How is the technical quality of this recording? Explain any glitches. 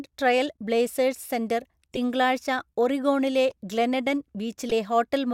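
Three short glitches stand out, all from corrupt frames being decoded: at 1.92–1.98 s, 3.50–3.58 s, and 4.69–4.72 s, just after "ഒറിഗോണിലെ ഗ്ലെനെഡൻ". In each, a few compressed frames arrived with flipped bits and were still played. Misread gains and codes scattered energy into the wrong frequencies, producing brief chirps, squeaks, blips or bursts of noise. The first is loudest, peaking around -15 dBFS, the third around -20 dBFS and the second around -30 dBFS. On a spectrogram each shows as a sharp-edged block of misplaced energy lasting a few frames.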